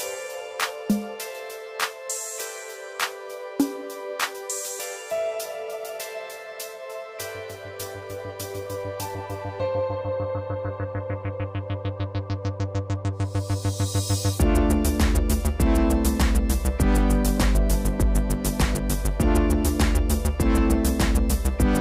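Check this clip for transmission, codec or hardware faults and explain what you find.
There's one fault: a stretch where the stream drops to a lower bitrate. From 7.45 to 11.45 s, an adaptive stream at a lower bitrate kicks in. Codec artefacts jump up, then quality snaps back with no gap. That sounds like the player switching to a leaner version, roughly half the bitrate, when the connection slowed.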